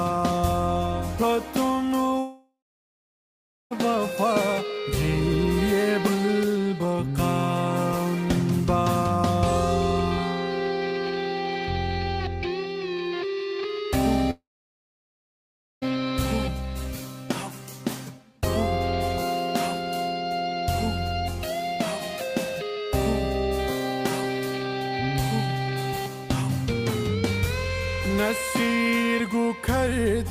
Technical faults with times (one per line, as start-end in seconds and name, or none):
2.19-3.73 long network dropout
14.31-15.89 long network dropout